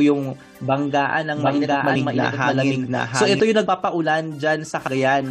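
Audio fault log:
1.36–3.40 s, doubled audio track: from 1.36 s a second copy of the sound runs about 700 ms behind the first, at roughly the same loudness, so everything is heard twice. The copy is full-band and completely dry, with no decay or room sound, and it cuts in and drops out abruptly at each end. That points to the audio being captured a second time through a slower path, or an edit likely holding two copies out of step.
1.94 s, 3.66 s and 4.87 s, compressed frames skipped: at each of these points the sound lurches forward, dropping roughly 150 ms, 50 ms and 70 ms of audio. Each jump is a whole multiple of a 23.2 ms frame, so whole compressed frames are going unplayed, either missing from the file or thrown out by the decoder as damaged.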